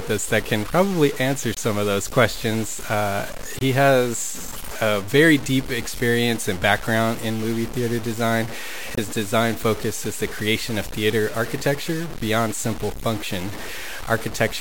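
Gritty, grainy distortion runs through the whole speech and tracks its level, loud and close beneath it. Quiet passages drop out or sputter. Likely low bit depth without dither, from truncation to about 5 bits.

Short silent holes open abruptly at 1.54–1.58 s, 3.58–3.62 s and 8.95–8.99 s. Each is a corrupt frame muted: damaged compressed frames, one at the first hole and two at each of the others, were rejected and replaced with silence. Timing stays intact.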